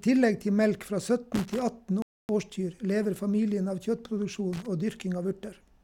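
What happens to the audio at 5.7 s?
At 5.7 s the speech continues intact, with no dropout, click, distortion or other fault at that point.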